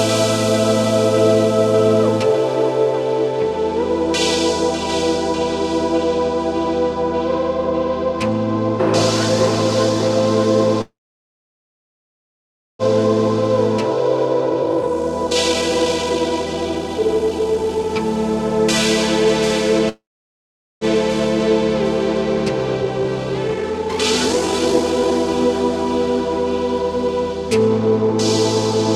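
At 10.81 s the sound stops until 12.82 s. This is a call audio freeze. Packets were likely delayed and the jitter buffer ran dry. A brief fading tail gives way to about 1.9 s of silence. Playback then resumes where it stopped, with nothing lost.

From 14.51 to 17.89 s a jitter buffer speed-up follows. The receiver trims tiny pitch-period slices to shed built-up delay. The sound plays at 154% speed with unchanged pitch, dropping about two seconds, and feels rushed.

A second freeze runs from 19.89 to 20.84 s. About 0.81 s of it is silent.

A second speed-up runs from 22.83 to 25.49 s at 135%. It cuts about a second.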